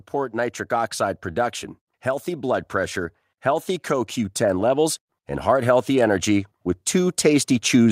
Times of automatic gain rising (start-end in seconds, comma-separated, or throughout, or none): 2.25-7.92